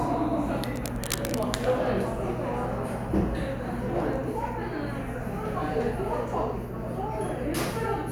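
A recording of sounds carries cable scratch noise from 0.76 to 1.46 s: dense, uneven scratching bursts roughly 10 dB below the signal, likely from a worn cable or connector being moved.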